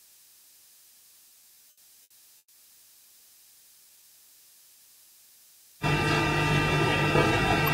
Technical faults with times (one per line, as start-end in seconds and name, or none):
1.29-2.55 repeated stalls (stutter)
3.78-4.03 jitter buffer slow-down